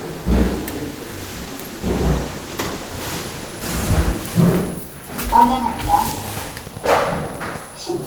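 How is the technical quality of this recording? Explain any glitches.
The recording has two glitches: a call bitrate drop and a train of clicks.

From 1.14 to 4.55 s there is a call bitrate drop. The encoder's rate falls from 32 to 16 kbps and stays at its lowest for 2.59 s. Opus codes more coarsely at that rate and trims the top end. The sound turns rough and muffled.

From 5.78 to 7.57 s there is a train of clicks. About twenty pulses arrive at a regular 10 per second. Each one is roughly as loud as the sound itself. The likely cause is interference from nearby equipment or a faulty connection or power supply. It is heard as steady ticking.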